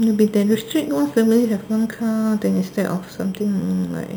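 A bright, metallic fizz rides on top of the speech for the whole clip, rising and falling with the level of the talking, sitting about 24 dB below it. This is imaging from sample-and-hold upsampling: each original sample was simply repeated to reach 44.1 kHz, with no smoothing filter, so mirrored copies of the spectrum survive. The lowest copy lies between about 5.5 and 11 kHz, which fits an original rate near 11 kHz.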